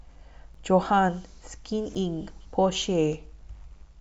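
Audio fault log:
0.54 s and 1.95 s: block of digital silence. The speech drops to silence for about 7 ms and then 5.8 ms, the second fitting a 256-sample block left unfilled. The abrupt cut and return make each gap heard as a brief tick.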